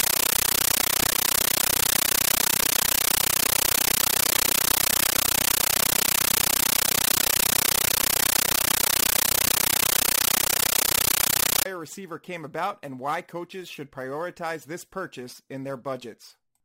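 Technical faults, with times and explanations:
0.0 to 11.7 s, compressed stream played as audio: the playback chain passed an AC-3 bitstream through as if it were ordinary PCM samples instead of decoding it. Each encoded frame lands as a 13.3 ms blast of noise followed by silent padding, repeating 31.25 times a second, which fits a 640 kbps Dolby Digital stream. The result is harsh, very loud chattering static replacing the speech until proper sound returns at "receiver came about and".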